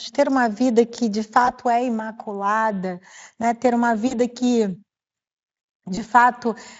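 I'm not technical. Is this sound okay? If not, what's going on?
No. There are three brief glitches, at 1.45, 4.07 and 5.95 seconds, caused by VoIP packet loss concealed by the speech codec. Small pieces of the call, about 20, 40 and 20 milliseconds long, went missing. The decoder filled each gap by stretching the last sound into a short buzzy tone or fading noise rather than leaving silence. That stretched sound, not a clean gap or click, marks it as concealed loss.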